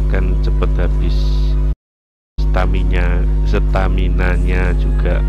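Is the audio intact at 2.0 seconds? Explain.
No. A playback stall runs from 1.72 to 2.39 s, so at 2.0 s the output is silent, with the gap lasting about 0.65 s. The sound halts mid-flow and then resumes. The likely cause is the player running short of data or having its thread blocked, leaving nothing to send to the output until it recovered and picked the stream up again.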